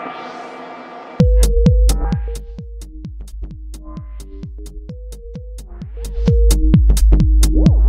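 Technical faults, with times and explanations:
No technical faults detected.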